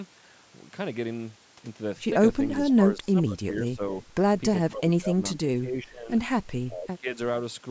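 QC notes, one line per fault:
2.60–3.82 s, 4.68–6.12 s and 6.67–7.09 s: speech suppressed in double talk. The speech level drops within each span, by roughly 15 to 20 dB at its deepest, and about a second of the first two spans and under half a second of the last are affected. The likely cause is an echo canceller mistaking local speech for loudspeaker echo during overlap and turning it down. The band above 8 kHz is empty throughout.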